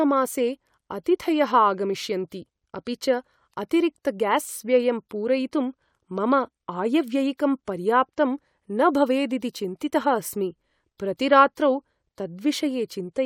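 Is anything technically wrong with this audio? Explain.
No, nothing is technically wrong with this audio.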